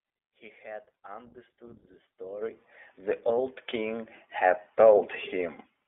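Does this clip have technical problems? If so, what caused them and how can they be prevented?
Yes. Throughout the speech, iLBC codec damage is plainly audible: a rough, slightly synthetic narrowband sound confined to roughly 300 Hz to 3.5 kHz, with frame-by-frame coarseness that fits 20 ms frames at about 15 kbps. A spectrogram shows nothing above 3.5 kHz and smeared harmonics. Recording or sending through a wideband codec prevents it.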